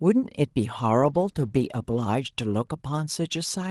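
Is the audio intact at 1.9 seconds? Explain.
No. A call bitrate drop runs from 1.02 to 2.12 s. The encoder's bit budget was cut sharply, which fits a fall from 40 to 18 kbps, so the speech is coded more coarsely and sounds rough and watery until the bitrate recovers.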